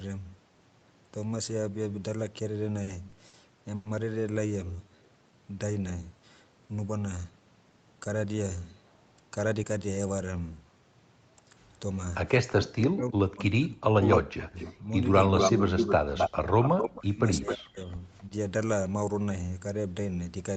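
From 2.83 to 3.87 s, packets arrived late and the jitter buffer kept running dry. The result is repeated stalls (stutter): four gaps, 220 ms in total and the longest 100 ms, were filled by stretching the preceding sound. Nothing is lost, but about a fifth of that stretch drags and catches.

From 4.76 to 5.10 s, a jitter buffer slow-down rebuilt the buffer's reserve by repeating single pitch periods. This added 61 ms, so the audio plays at about 85% speed with the pitch unchanged, and the sounds are drawn out.

Echo leak runs from 12.47 to 12.52 s, from 14.10 to 17.55 s and from 18.18 to 18.23 s. The likely cause is an echo canceller on the loudspeaker side that let its pickup return. The brief scraps come back about 327 ms and 262 ms late, at about 25 dB and 35 dB down. The long middle stretch repeats at 262 ms, roughly as loud as the voice itself.

Between 12.54 and 18.32 s, speech is suppressed in double talk, likely because the canceller could not separate the talker from that echo while both were active. 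For roughly four seconds in total the voice dips or cuts out in pieces, falling by as much as about 40 dB. Throughout, the Opus call path limits the band to 8 kHz.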